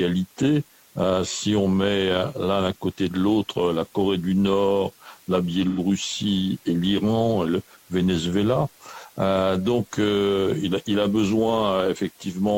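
The audio has one instance of AAC frame loss with concealment, from 5.68 to 5.79 s. About 85 ms of signal is missing, which fits two lost AAC frames. The decoder rebuilds the gap from the last good spectrum, so the patch sounds smeared and noisy.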